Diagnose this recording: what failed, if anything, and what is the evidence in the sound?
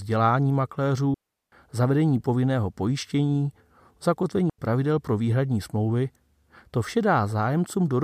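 The failure is a digital wireless dropout on the radio link between transmitter and receiver. The speech cuts to near silence from 1.14 to 1.52 s, a gap of about 380 ms, and again from 4.50 to 4.58 s, about 89 ms. Each hole opens and closes with a very short fade and no burst of noise on either side. That signature points to a receiver that lost too much data and muted its output rather than passing corrupted audio.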